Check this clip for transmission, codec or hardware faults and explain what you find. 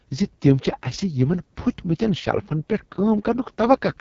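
The speech carries one fault throughout: AMR wideband (HD Voice) codec damage at the codec's lowest rate, most consistent with about 6.6 kbit/s. A low-bitrate pulse-driven vocal-tract model makes the speech rough and raspy, and the spectrogram shows noise-filled 6.4 to 7 kHz and nothing above 7.5 kHz.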